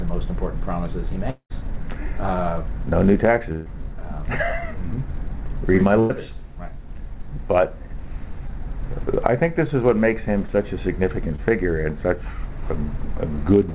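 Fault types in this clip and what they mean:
Long network dropout, 1.30 to 1.52 s: the sound is carried on as a fading continuation, then about 90 ms of silence, with roughly 0.2 s never returning. This is likely a stretch where no packets reached the receiver at all.
Burst of packet loss, 3.52 to 3.68 s and 6.00 to 6.11 s: consecutive packets arrived too late or not at all, 140 ms and 100 ms missing. The receiver stretched the preceding sound into a dimming buzz or hiss, then jumped ahead past the gap.
Short concealed packet loss, 8.47 to 8.51 s, 10.47 to 10.50 s and 11.36 to 11.40 s: about 20 ms dropped each time, patched by extending the previous sound and crossfading back, leaving a brief smear or wobble rather than an audible hole.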